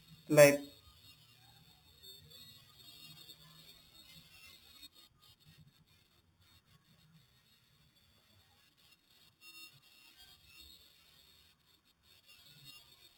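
A speech recording carrying imaging from sample-and-hold upsampling for its whole length. Each original sample was simply repeated to reach the higher rate, with no interpolation filter, so mirrored copies of the speech spectrum sit above the original band. The lowest copy fills roughly 4 to 8 kHz at about -15 dB relative to the signal, heard as a metallic fizz that rises and falls with the speech level. This fits conversion from 8 kHz to 48 kHz.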